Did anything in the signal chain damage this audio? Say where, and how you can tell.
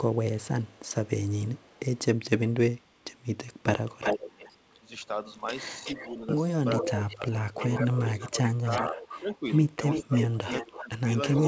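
Yes. Echo leak, in call processing: delayed copies trail the speech at 0.04–1.99 s (421 ms, faint, about 35 dB down), 2.52–4.81 s (372 ms, about 10 dB down), 5.38–6.2 s (372 ms, about 15 dB down) and 6.75 s to the end (325 ms, about 10 dB down). The likely cause is a far-end echo canceller letting loudspeaker pickup return.

Speech suppressed in double talk, also in call processing: the talker dips by about 5 dB for roughly 200 ms within 5.79–6.26 s, then by up to about 15 dB from 6.82 s to the end, while the echo overlaps. The canceller likely attenuated both signals together.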